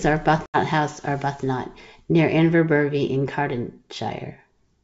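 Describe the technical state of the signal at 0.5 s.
Packet loss on an ADPCM call, 0.46 to 0.57 s: about four packets (80 ms) drop to silence, a hard-edged blank gap on the spectrogram, and the desynchronised decoder resumes slightly distorted.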